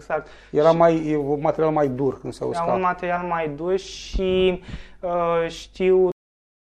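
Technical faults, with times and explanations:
6.12–6.74 s, cut-off end: the sound stops abruptly at 6.12 s, mid-event, and what follows is flat digital silence with no decay or tail. The final stretch of audio was never written out or played back, so the waveform doesn't fade. It jumps from active signal straight to silence. The last sound is sliced partway through, and the remaining 0.6 s is dead air.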